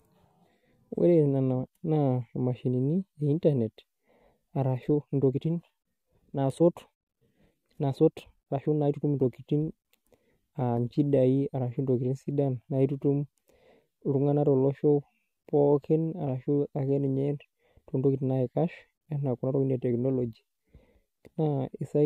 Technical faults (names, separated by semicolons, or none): time-stretched section